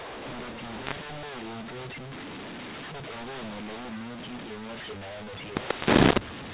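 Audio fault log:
Throughout, mu-law and A-law mixed up: the speech was coded with the A-law curve of G.711 and then expanded with the mu-law curve, so each 8-bit code maps to the wrong level. Some samples swell, others shrink, and the quietest are pushed well above silence. The result is harsh, gritty distortion riding on every syllable, with the pauses filled by hiss, all inside a telephone band that stops at 4 kHz.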